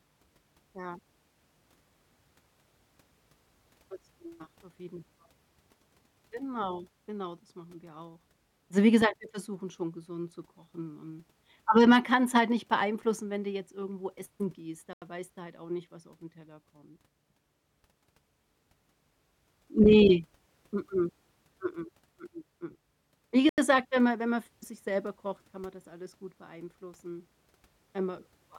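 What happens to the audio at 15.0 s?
After "jetzt irgendwo essen gehst", sound drops to an 85 ms silence (14.93–15.02 s), a blank vertical gap on the spectrogram, before "weißt du halt auch", likely a Bluetooth stall from a starved buffer.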